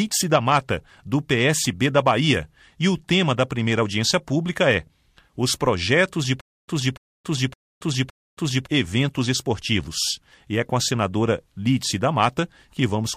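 From 6.41 s to 8.67 s there is a stutter with silent gaps. A short burst of about 290 ms plays, then cuts to digital silence for about 274 ms. The same burst returns four times, on an even 564 ms cycle. The likely cause is a stalled player or stream that replayed its last fragment at each retry and then ran dry. Whatever should have sounded during those two seconds is gone.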